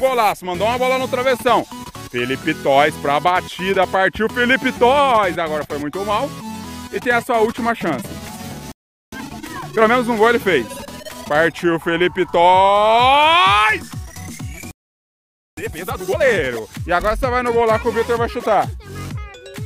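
At 8.72 s the audio halts for 0.41 s, then again at 14.71 s for 0.86 s. This playback stall most likely comes from the player starving for data. Unlike a brief dropout, each gap is long and the sound then resumes.

Each restart brings time-compressed catch-up: 9.12 to 9.92 s runs at 1.5 times speed, and 15.57 to 16.43 s at 2 times. Small pieces are cut and cross-faded, so pitch stays normal, unlike a simple speed-up, which would raise the pitch.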